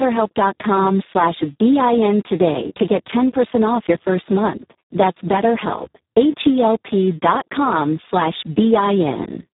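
From start to finish the speech carries heavy Speex codec damage. The sound is hoarse and noisy, which fits a bitrate near 4 kbps that leaves the CELP excitation badly starved of bits. Nothing is present above 3.8 kHz.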